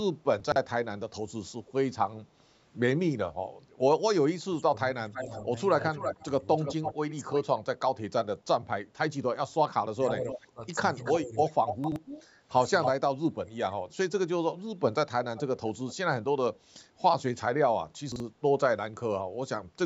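Chunks out of order occur in this speech recording at 0.40 to 0.56 s, 11.84 to 11.96 s and 18.12 to 18.20 s. Each is a short garbled moment where a piece of audio about 40 ms long plays after material that should follow it. Nothing is lost, but the jumbled spans of about 0.16, 0.12 and 0.08 s suggest a piece arriving three, then two, then one slot too late, with hard joins at each splice. Speech suppressed in double talk affects 4.40 to 8.47 s, 9.95 to 11.65 s and 12.93 to 13.85 s. The talker's level dips in pieces by up to about 20 dB in the first two stretches and about 25 dB in the third, adding up to roughly a second, under a second and a second. The likely cause is an echo canceller that, with both sides talking, could not tell its own talker from loudspeaker echo and turned everything down. Echo leak appears at 5.13 to 7.44 s, 10.29 to 12.89 s and 15.36 to 15.95 s as a delayed copy of the speech trailing by 331 ms, 283 ms and 367 ms. 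It sits about 10 dB below the direct speech in the first two spans and about 20 dB below in the last. This is likely residual loudspeaker pickup that the far end's canceller failed to remove and sent back.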